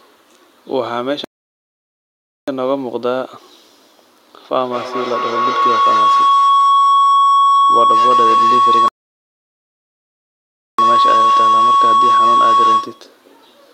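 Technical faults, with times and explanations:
1.24 to 2.48 s and 8.88 to 10.79 s, playback stall: the speech cuts to dead silence for about 1.2 s, then about 1.9 s, before resuming. The likely cause is the player running out of data or its thread being blocked, so output simply halts until it recovers.
4.56 to 13.13 s, feedback howl: a whistling tone near 1 kHz grows out of the speech, with the loop repeating roughly every fifth of a second, and peaks about 7 dB above the voice. A microphone-to-loudspeaker loop adds gain each pass, so repeats build instead of dying away.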